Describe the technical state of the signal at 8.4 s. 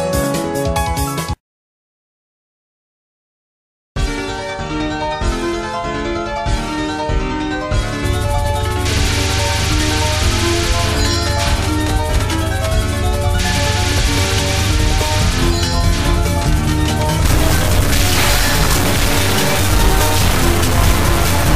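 At 8.4 s the signal is intact, with no dropout, distortion, glitch or other fault audible at that point.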